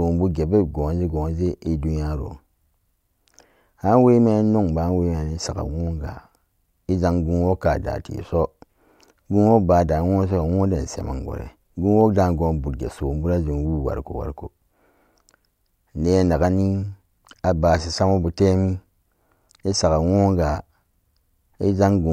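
No technical faults can be heard in the audio.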